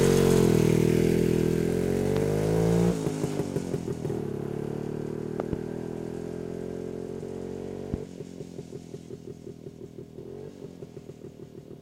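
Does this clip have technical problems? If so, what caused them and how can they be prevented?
Yes: loud pops on top of the sound, doubled at 2.17–2.25 s and 5.40–5.55 s (about 15 dB up), single at 7.94–7.96 s (about 10 dB). They're likely voltage spikes from plugging, switching or static. Secure connections and mute before switching.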